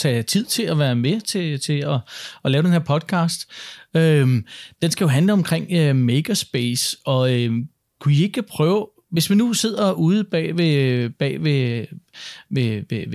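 No technical faults can be heard anywhere in the speech recording.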